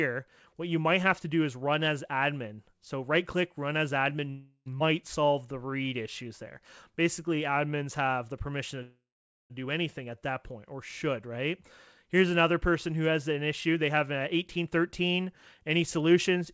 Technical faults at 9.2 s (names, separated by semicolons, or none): call audio freeze